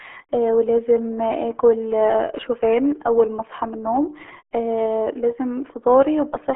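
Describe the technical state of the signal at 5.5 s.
At 5.5 s the speech carries the RealAudio 14.4 codec damage present across the whole clip. A very low-rate coder, likely around 8 kbit/s, cuts everything above 3.8 kHz and leaves a muffled, gargly texture. That gargle separates it from clean telephone band-limiting.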